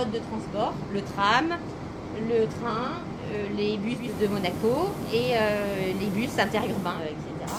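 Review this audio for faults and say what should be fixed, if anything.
At 3.93 s the digital signal drops out and the receiver shows digital radio blending to analogue. It cross-fades over about a quarter of a second to the FM broadcast of the same station. It blends back to digital at 7.05 s. During the FM stretch, hiss rises to roughly 25 dB below the signal. The level also shifts by about 2 dB. Better digital reception, or fixing the radio to digital only, would prevent this.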